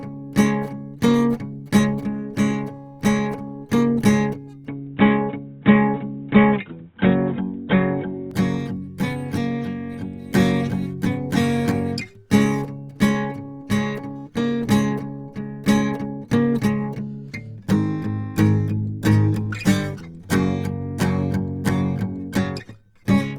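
The whole music clip has grainy, rough tones that sound like likely Opus compression in its music mode, at a rate consistent with about 24 kbps. From 4.68 to 8.31 s it turns dull and boxy, capped at 3.8 kHz, with a small level shift and faint new hiss, probably an input switched to a poorer device.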